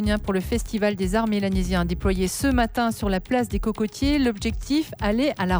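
Nothing stood out as a fault on listening; the audio gave no sign of anything going wrong at any point.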